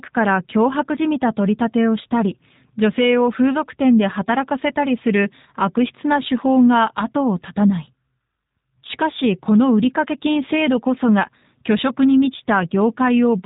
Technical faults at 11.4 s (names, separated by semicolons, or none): G.729 codec